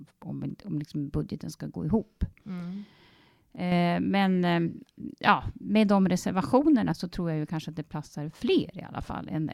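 At 3.56 to 3.72 s and again at 6.92 to 7.00 s, the speech drops abruptly by about 6 dB and then snaps back. This is most likely one channel dropping out: one stereo side briefly goes silent, so the mono sum loses half its shared content. On a waveform each event shows as a sharp-edged notch where the envelope halves, and on a spectrogram as a uniformly dimmer band across all frequencies.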